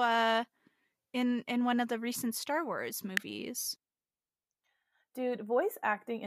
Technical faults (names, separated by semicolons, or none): electrical switching spike